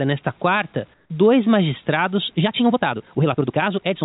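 At 0.94 s, just after "nesta quarta", the real background drops out for 160 ms until "dois magistrados" at 1.1 s. This is comfort noise in place of the background. The background sits about 39 dB below the loudest speech. The filler is about 6 dB quieter than the room sound around it. It is flat and featureless, with no texture. The likely cause is discontinuous transmission, with the receiver inserting synthetic noise.

From 2.35 s, right after "nesta quarta dois magistrados", the rest of the clip is a time-stretched section. The speech runs 1.76 times faster, but the pitch does not rise. Short pieces have been dropped to squeeze it. The pace jumps abruptly and sounds rushed. The likely cause is software fitting the audio to a set length. Throughout, nothing sounds above 4 kHz, which fits a narrowband call codec.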